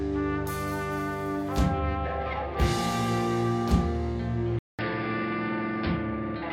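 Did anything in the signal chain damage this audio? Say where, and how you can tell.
Yes. At 4.59 s the music cuts out for about 0.2 s, then returns dull and boxy, a little quieter, with nothing above 5.3 kHz and a faint new noise floor to the end. A codec low-pass wouldn't add a gap, noise and level shift, so this is likely an input switched to a poorer device.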